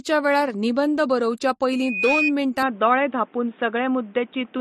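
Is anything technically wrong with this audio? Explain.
Yes, three problems. Throughout, nothing above 13.5 kHz and layered smeary artefacts suggest the speech likely went through MP3 and then AAC, so this is transcoding between lossy codecs.

From 1.72 to 2.33 s there's a loudspeaker feedback squeal. The mic catches its own speaker until a 2.5 kHz tone runs away, swelling over roughly 0.4 s to about 5 dB above the speech.

From 2.63 s to the end, the sound abruptly turns boxy and narrow, with nothing above 3.8 kHz and a faint new background noise. The input was likely switched to a poorer device, with no gap and roughly no change in level.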